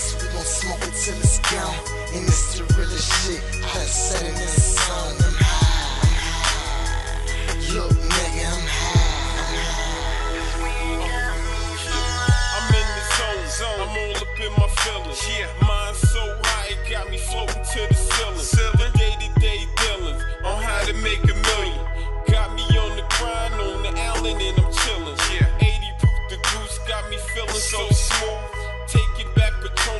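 No technical faults are audible.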